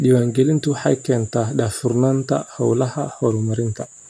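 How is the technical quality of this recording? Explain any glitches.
No audible glitches or faults.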